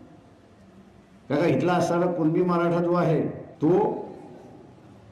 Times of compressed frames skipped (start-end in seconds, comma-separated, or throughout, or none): 2.79